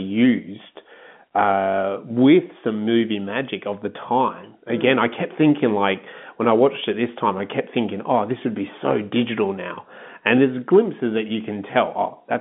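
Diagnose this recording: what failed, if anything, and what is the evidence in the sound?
Nothing failed; this telephone-band speech shows no faults.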